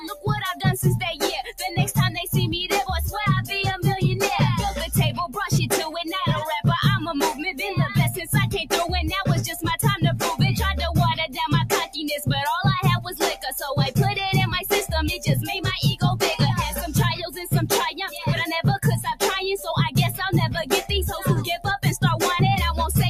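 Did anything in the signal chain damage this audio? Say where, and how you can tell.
Yes. The damage is in call processing: a speech-tuned noise suppressor was left running across the whole clip, so this is a noise suppressor applied to music or sounds. It treats sustained, steady content as background noise and keeps adjusting its gain against it. The result is a level that swings by around 10 dB, with sustained material and tails pumping and thinning while sharper onsets pass largely intact.

The clearest evidence is sound cut by the noise suppressor at 0.00–0.28 s (down about 12 dB), 1.44–1.66 s (about 11 dB), 2.17–2.34 s (about 6 dB), 13.05–13.47 s (about 10 dB), 17.20–17.48 s (about 9 dB), 17.91–18.22 s (about 10 dB) and 20.64–20.91 s (about 11 dB). In each window the suppressor judged the sound to be noise and dipped it well below its surroundings for a fraction of a second.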